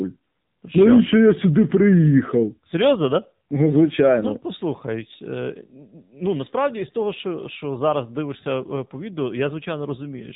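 The speech carries the AMR narrowband mobile codec throughout. Everything above 3.8 kHz is gone, and the buzzy, synthetic vocal-tract modelling fits a low mode of about 7.4 kbps.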